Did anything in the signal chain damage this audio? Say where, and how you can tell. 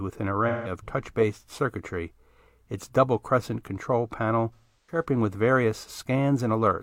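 Yes, at the codec stage, through AAC frame loss with concealment. From 0.48 to 0.72 s, just before "touch based circuitry its", the speech turns smeared and noisy. From 4.54 to 5.04 s, between "double crescent control panel" and "with various", a similar phasey wash recurs in patches. The decoder lost whole frames, about 171 ms at first and about 299 ms later (longest gap around a fifth of a second), and filled them by re-synthesising the last good spectrum.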